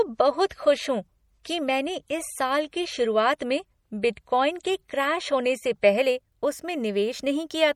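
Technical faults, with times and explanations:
0.0 to 6.0 s, adaptive stream starting at a low bitrate. For the first six seconds the speech sounds thin and smeared. The treble is dull, and codec artefacts are stronger. The sound fits an MP3 stream near 48 kbit/s. The player began on a cheap version to start quickly. Once it had measured the connection, it switched up. At 6.0 s the quality jumps to a fuller sound, consistent with about 128 kbit/s. There is no gap at the switch.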